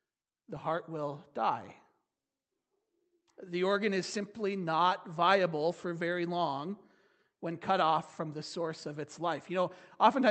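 Nothing stood out on listening to this speech, which arrives through an Opus call path whose audio band stops at 8 kHz.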